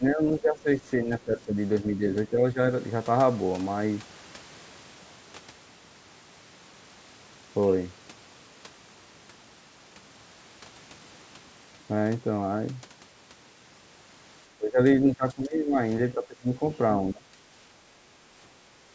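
At 0.0–0.84, 1.02–1.58, 2.3–2.59, 14.57–14.8, 15.01–15.78, 16.14–16.61 and 17.11–17.28 s, the speech dips by roughly 10 to 20 dB in uneven pieces. This is speech suppressed in double talk, likely an echo canceller turning down the talker along with the far-end echo. Unlike packet-loss dropouts, the level drops partly rather than going fully silent.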